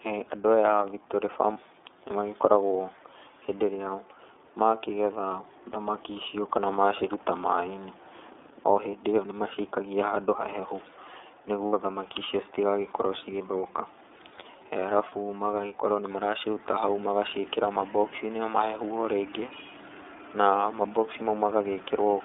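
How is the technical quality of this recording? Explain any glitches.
It's clearly narrowband VoIP audio with a few dropout patches. The whole clip runs through the iLBC codec, with the band squeezed to about 250 Hz to 3.6 kHz. That fits the 13.33 kbps, 30 ms-frame mode. The speech comes across a bit rough and synthetic.

There are also lost iLBC frames at 1.53–1.57 s, at 11.67–11.73 s just before "thamaki icio", and at 15.09–15.13 s right before "magagĩkorwo nĩ maraciruta hau". The decoder covers each gap by repeating the last pitch cycle mixed with noise, so you hear a short buzzy held vowel. The gaps fit one, two and one missing frames, and the speech snaps back immediately afterward.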